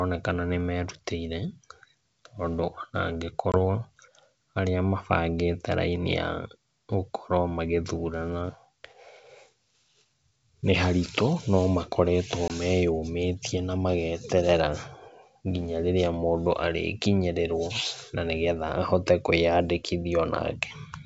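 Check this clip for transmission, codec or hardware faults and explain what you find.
There's one fault, which shows up twice: packet loss on an ADPCM call, at 3.52 to 3.57 s and again at 12.48 to 12.51 s. The wideband G.722 coding itself comes through clear, with only faint upper-band hiss.

Each time, about one packet's worth of audio (about 20 ms) drops to silence, leaving a hard-edged gap. The decoder's predictor and step size then lose track of the sender's, so the speech comes back slightly distorted and settles within a few tens of milliseconds.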